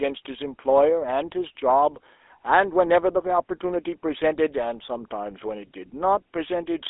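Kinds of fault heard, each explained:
GSM full-rate codec: the speech was coded by modelling the vocal tract with sparse regular pulses, giving a buzzy, gravelly roughness and cutting everything above 3.8 kHz.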